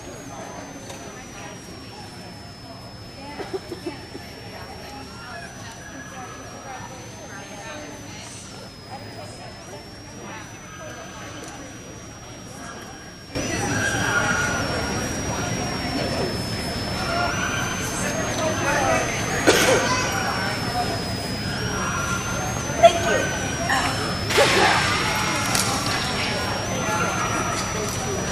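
A switching supply whistle sits under the whole clip, a thin high tone wandering between about 5.04 and 6.65 kHz, only around 10 dB below the sound itself. It's a power supply running in an audible burst mode or beating with another one.

At 13.35 s everything leaps up by about 12 dB in one step, background noise included, and stays there to the end. That's a sudden gain jump, likely a digital gain setting applied instantly rather than ramped in.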